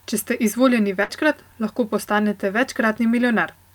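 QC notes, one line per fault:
1.03–1.12 s burst of packet loss: 55 ms of concealment stretches and fades prior sound, then 60 ms skipped; spectrogram shows decaying smear, abrupt jump.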